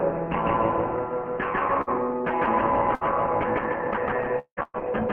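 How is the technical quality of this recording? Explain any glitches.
The recording has clear transmission damage. It suffers three short gaps and one longer one, all after the first 1.8 s of the clip.

Bursts of packet loss occur at 1.81 to 1.90 s, 2.95 to 3.04 s and 4.63 to 4.77 s. About 60 ms of audio vanishes in the first two, and 120 ms in the third. The receiver stretches the last sound to fill each hole and fades it down. You hear a brief buzz or hiss. The third one ends in a short silence before the sound resumes, slightly further along.

From 4.39 to 4.60 s there is a longer gap. This is likely a long network dropout. Nothing arrives for about 180 ms. The receiver keeps extending the last sound as a fading buzz or hiss. It then runs out and leaves a short stretch of silence. The audio returns with that portion missing, and is almost immediately hit by the final burst at 4.63 s.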